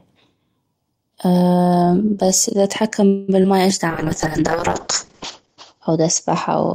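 At 3.07 s, right after "بس اذا اتحكم", the speech stalls for about 0.21 s: the last sound is stretched into a fading buzz, then resumes exactly where it stopped, with nothing lost but the call running 209 ms later. That is a call audio freeze, likely from delayed packets draining the jitter buffer, and it differs from packet loss because no audio is skipped.

Just after, from 3.42 to 3.46 s, still following "بس اذا اتحكم", a brief smear appears. This is short concealed packet loss: about 20 ms never arrived and was covered by extending the preceding sound before blending back. Unlike the freeze, this audio is actually missing.

From 3.89 s to the end, a call bitrate drop takes the encoder from 32 kbps to 7 kbps, holding the lowest rate for about 1.2 s. The bandwidth falls from 20 kHz to 8 kHz, so the speech turns muffled and rough. It is a sustained change of tone, not a momentary dropout or gap.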